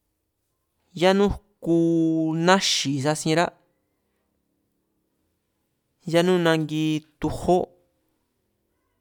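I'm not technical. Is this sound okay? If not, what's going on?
Yes, it's fine: nothing in this recording stands out as a technical problem, so there's nothing you need to worry about.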